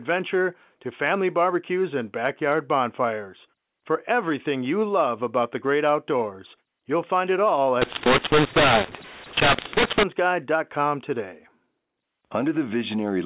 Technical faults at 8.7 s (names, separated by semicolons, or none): mu-law and A-law mixed up